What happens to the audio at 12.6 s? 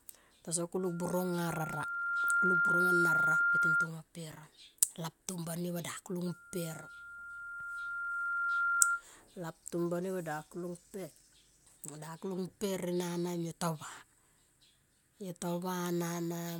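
At 12.6 s the speech carries a steady buzz of about 43.1 Hz from a block size mismatch (truncated), which runs through the whole clip. One stage writes longer blocks than the next reads, so each block's tail is discarded. The buzz rate fits 1024-sample blocks, and the pace stays essentially normal.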